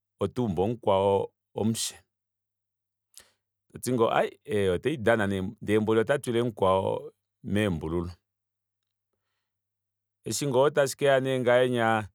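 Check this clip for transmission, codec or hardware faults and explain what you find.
Nothing here points to a transmission, codec or hardware problem; the speech comes across steady and intact the whole way.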